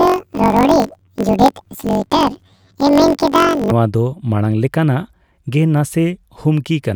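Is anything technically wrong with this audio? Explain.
Yes. From 0.00 to 3.73 s, planar audio is read as interleaved. Each 21.33 ms block, which fits 1024 samples, plays twice at double speed. The speech sounds an octave high with a flutter at 46.9 Hz, clearing just before "ᱫᱚ ᱢᱟᱲᱟᱝ ᱞᱮᱠᱟᱱᱟᱜᱼᱜᱮ".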